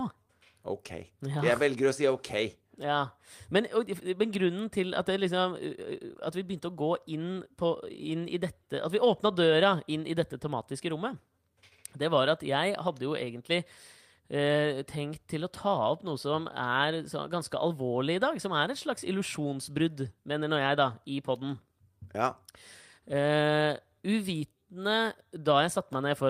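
No technical faults are audible anywhere in the speech.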